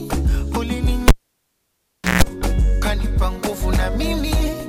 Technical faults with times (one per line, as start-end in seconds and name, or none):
1.08-2.23 cable pulled and plugged in